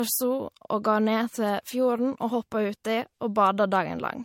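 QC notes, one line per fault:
Throughout, generation loss: swirly, hollow speech, smeared attacks, nothing above 16.5 kHz, worse than one 64 kbit/s-like MP3 pass; likely re-encoded about three times.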